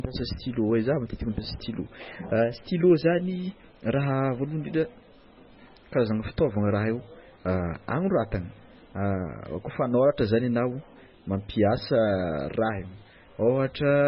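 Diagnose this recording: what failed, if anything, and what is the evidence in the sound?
Codec stage: throughout, nothing above 5.5 kHz plus heavy watery swirl, likely MP3 compression near 16 kbps; a plain low-pass filter would dull without swirling.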